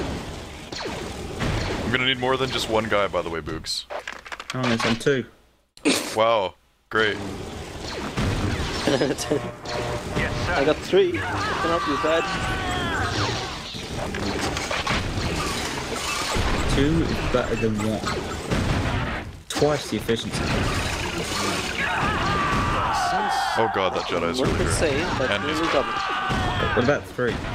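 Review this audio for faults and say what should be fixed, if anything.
No faults; nothing needs fixing.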